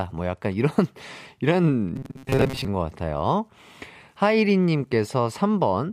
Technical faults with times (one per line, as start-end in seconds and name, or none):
1.96-2.66 robotic sound from repeated short buffers